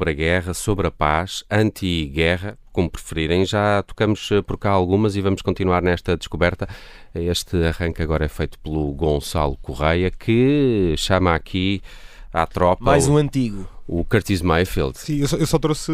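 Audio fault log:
Nothing stood out on listening to this speech recording.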